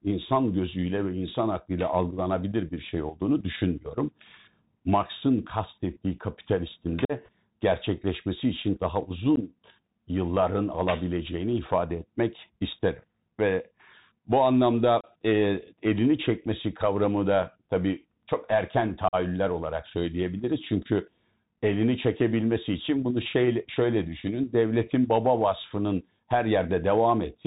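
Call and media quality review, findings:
Bluetooth CVSD headset codec, whole clip: call routed over the narrowband headset link, one-bit delta modulation with adaptive step, consistent with a 64 kbps CVSD stream. Audio band stops near 4 kHz, so speech sounds muffled and boxy. Step size cannot track loud, bright sounds, so sibilants come out scratchy and peaks distort. Constant granular hiss under the speech throughout. Damage plainly audible.

Unconcealed Bluetooth headset packet loss at 7.05 s (45 ms, several packets), 9.36 s (15 ms, a couple of packets), 15.01 s (30 ms, a few packets) and 19.08 s (45 ms, several packets). Headset-to-phone radio link dropping voice packets with no concealment; gaps filled with silence or idle pattern. Short holes in the speech with hard edges that can click, and the speech returns briefly quieter as the CVSD decoder re-settles.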